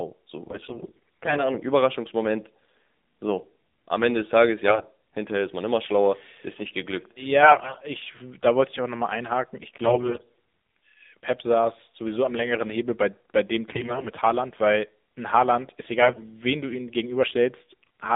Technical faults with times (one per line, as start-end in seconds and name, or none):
0.00-18.16 AMR narrowband mobile codec
0.46-1.50 AMR bit errors
4.68-4.87 AMR bit errors
7.42-7.81 AMR bit errors
9.84-10.33 AMR bit errors
13.68-14.09 AMR bit errors
16.02-16.23 AMR bit errors